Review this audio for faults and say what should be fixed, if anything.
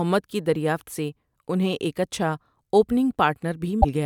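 Near the end, from 3.78 to 3.85 s, there's a short burst of damaged data in the compressed stream: the decoder hits corrupted frames and loses sync before it locks onto the next good frame. Worth checking the file's integrity or re-fetching it from a clean source so the corruption never reaches the decoder.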